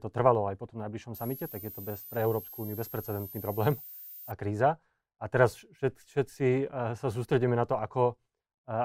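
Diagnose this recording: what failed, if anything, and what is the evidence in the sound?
A switching supply whistle, an analogue power fault, runs from 1.14 to 4.32 s: a thin tone wandering between 11.5 and 14.6 kHz, about 15 dB below the speech. A switching supply running in an audible burst mode or beating with another one causes it. Unlike mains hum, it is high and its pitch drifts.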